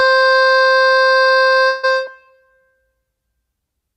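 A long network dropout likely interrupted the stream from 1.67 to 1.85 s, losing 160 ms of the music. The receiver filled the gap by drawing out the last sound as a fading buzz or hiss that never falls to silence, then the music resumes further on.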